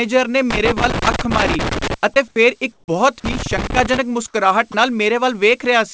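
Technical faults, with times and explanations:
0.50–1.94 s and 3.25–3.98 s, loose connector crackle: two irregular bursts of scratchy crackle, the first lasting almost a second and a half and the second about 0.7 s. That sound comes from a worn or dirty contact somewhere in the chain flickering between connected and open as it shifts. Each break chops the signal, and any DC sitting on the line turns the make-and-break into little pops, so you get that ragged, uneven texture.
2.28–2.36 s, comfort noise in place of the background: for about 80 ms the real room background, which sits roughly 35 dB below the loud parts, drops out and is replaced by a flat, featureless hiss about 7 dB quieter. The likely cause is the sender's voice detector hearing nothing it counted as speech and pausing transmission, so the receiver filled the gap with synthetic noise shaped only loosely like the actual background. 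That's why the detail vanishes and the level dips.
2.72–2.88 s and 4.72–4.74 s, sound dropped by the voice detector: in the first spot about 160 ms of audio is replaced by steady noise, and around 100 ms of actual speech goes missing before it snaps back. The second is a brief 20 ms gap where the same thing happens. The detector likely mistook part of the speech for background and stopped sending, and the receiver slotted in comfort noise until the detector fired again. The band-limited sound, with nothing above 8 kHz, fits a G.722 call path.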